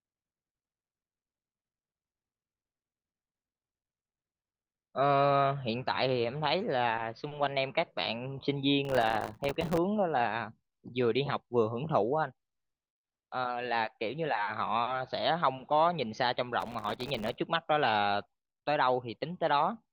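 Speech with processor overload crackle from 8.85 to 9.78 s and 16.60 to 17.37 s: around a hundred tiny buffers in each, roughly 1.5 ms each, missed and dropped to silence, giving gritty tearing.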